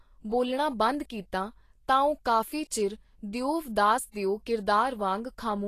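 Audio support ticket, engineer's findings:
Vorbis compression, throughout. Speech hissy and grainy, consonant onsets smeared, upper treble rolled off. Likely a low-quality Vorbis encode, consistent with roughly 34 kbps: coarse residue quantisation turns high-frequency detail into noise-like energy over the spectral floor. Damage plainly audible.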